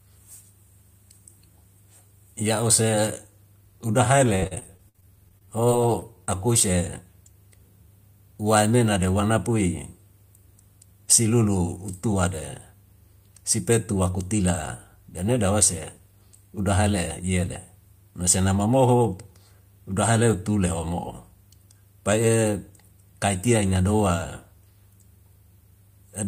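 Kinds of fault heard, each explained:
Repeated packet loss (robotic sound): Between 4.35 and 6.29 s the audio drops out in sixteen short holes, the longest 62 ms. Each hole is patched by extending the preceding sound, covering about 18% of that stretch and giving choppy speech with pieces missing.
Jitter buffer speed-up: From 8.66 to 8.99 s the receiver drains surplus buffered audio by cutting out short pitch-period segments, roughly 40 ms in all. The speech runs at about 109% speed with unchanged pitch, so that brief passage sounds hurried.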